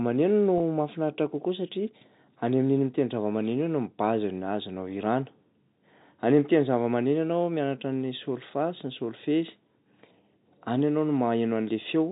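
At 0.58 s, about 20 ms of speech drops out until 0.60 s, which fits a single lost packet. This is packet loss with pitch repetition. The receiver fills the gap by replaying the last pitch period, so the sound briefly holds with a slight buzz. Underneath, the G.711 telephone coding stays band-limited below 4 kHz.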